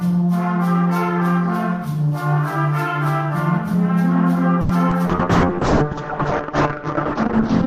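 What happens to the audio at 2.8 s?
Nothing goes wrong at 2.8 s, and the audio passes through that moment intact.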